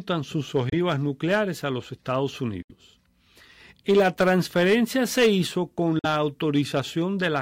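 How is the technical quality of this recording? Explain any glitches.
The speech has three short silent gaps, at 0.69–0.73 s, 2.62–2.71 s and 5.99–6.05 s, lasting about 23, 70 and 46 ms. These are likely Bluetooth dropouts: late packets were discarded, consistent with one, three and two lost 23 ms frames. Unlike an edit or stall, speech resumes further along, as though it kept playing.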